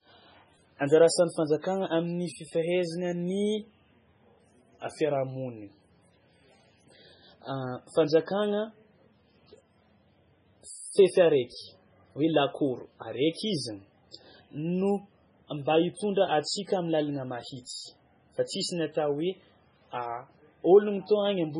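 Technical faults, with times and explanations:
Throughout, MP3 compression: the speech sounds watery and swirly, with smeared attacks and nothing above 10.5 kHz. This is likely heavy MP3 encoding, with damage that fits a bitrate around 16 kbps, where weak frequency lines flicker on and off between frames.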